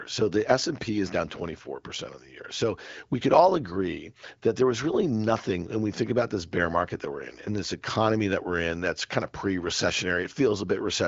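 No technical faults can be heard anywhere in this speech. It has passed through an AMR wideband (HD Voice) codec at a rate that keeps speech clear, with the audio band ending at about 7.4 kHz and only light codec shaping audible.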